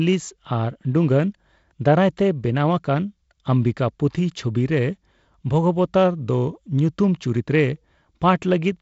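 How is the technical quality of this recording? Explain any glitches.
No glitches can be heard: the speech runs without interruption on a wideband telephone path, with G.722 coding limiting the audio to below about 7.7 kHz and leaving only light coding noise, consistent with the codec's lower 48 kbit/s rate.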